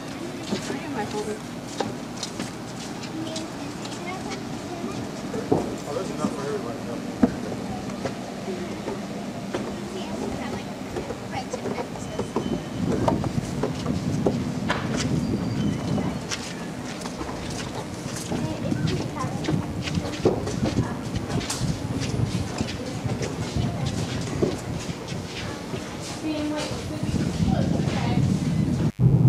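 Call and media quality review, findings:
Mains buzz, whole clip: steady raspy buzz, 50 Hz base with harmonics up into the kHz range, sitting roughly 25 dB under the signal. Probably a dimmer, rectifier or unshielded run injecting switching spikes twice per mains cycle. Check grounding and cable shielding first.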